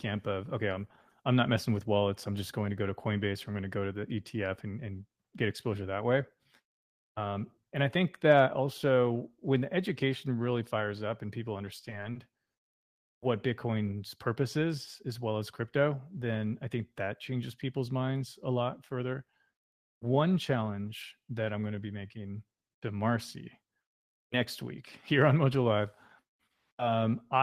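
From 11.81 to 12.82 s, just after "fires up and people", the speech shows repeated stalls (stutter). Packets kept arriving late, so the jitter buffer emptied six times. Each gap was filled by extending the last sound, about 150 ms in all with the longest 60 ms and nothing lost, so the phrase drags and catches. On a spectrogram these appear as short stretches of smeared, repeated harmonics. In the waveform they show as copied cycles.

Jitter buffer speed-up follows twice: from 15.06 to 15.61 s after "purpose is", running at 108% with around 50 ms trimmed before "then I think that", and from 22.54 to 22.99 s after "going to be making", at 112% with around 70 ms cut. In both spans the buffer had overfilled, so whole pitch periods were dropped. The speech sounds hurried at unchanged pitch, with compressed timing but normal harmonic spacing on the spectrogram.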